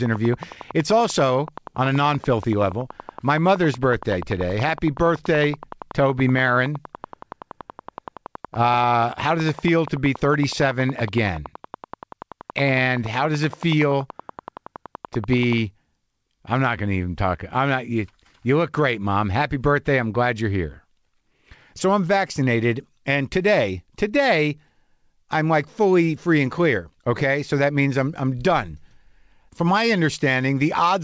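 Speech, overlaid by a train of clicks from 0.06 s to 15.54 s: a regular tick at 10.6 per second, peaking a few dB above the speech, likely interference or a faulty connection.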